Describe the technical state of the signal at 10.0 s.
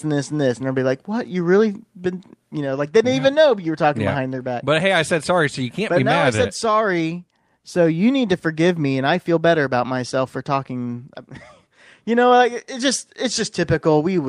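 At 10.0 s the speech signal is intact, with no audible technical fault at that moment.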